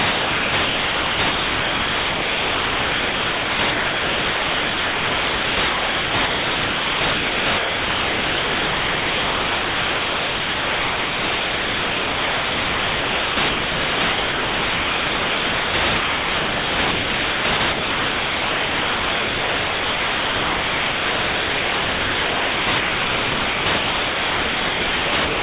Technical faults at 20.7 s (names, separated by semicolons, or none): sound chopped by the voice detector